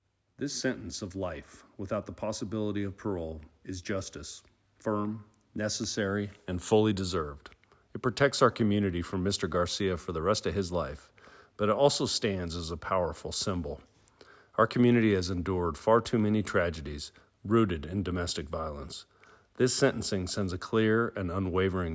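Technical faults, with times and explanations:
No technical faults detected anywhere in the clip.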